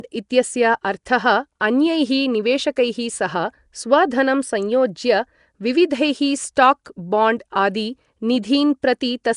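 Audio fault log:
throughout Nellymoser compression: the speech has a rough, hissy halo and a smeared, underwater quality, likely from the Nellymoser Asao codec at a rate that fits 44 kbps, which fills bit-starved bands with noise. A spectrogram shows speckled, blocky texture and nothing above 10.6 kHz.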